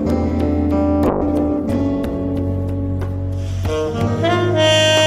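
From 1.08 s to the end, the audio turns rough and watery, with the top end dulled and muffled, and it stays coarsest for about 1.74 s. This is a call bitrate drop: the connection's bandwidth estimate collapsed, so the encoder was forced to spend far fewer bits, which fits a fall from roughly 96 kbps to 12 kbps. At that rate Opus quantises coarsely and trims the high frequencies, and quality never fully returns before the clip ends.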